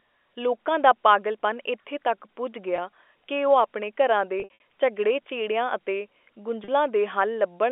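A brief buzzy hold at 2.76–2.78 s after "ਪਾਗਲਪਨ ਇਥੇ ਤੱਕ ਪੁੱਜ", a stretch of repeated buzzy holds at 4.40–4.60 s before "ਝਗੜਿਆਂ ਝੇੜਿਆਂ ਅਤੇ", and another hold at 6.64–6.68 s are packet loss with pitch repetition. Each time, the receiver loops the last pitch period to cover the missing audio.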